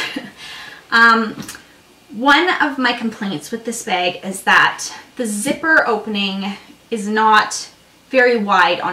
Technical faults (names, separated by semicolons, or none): hard clipping